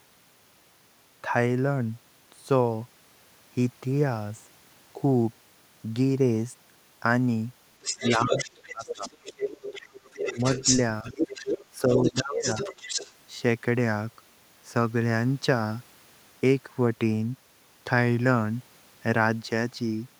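Speech clip. From 7.82 to 13.12 s the other side's voice leaks through, only slightly quieter than the talker. The echo canceller likely left loudspeaker sound in the microphone. The talker's speech is suppressed in double talk at 7.94, 8.72, 10.33, 11.03 and 11.77 s, dipping by up to about 20 dB. Likely the canceller turned down both voices at once.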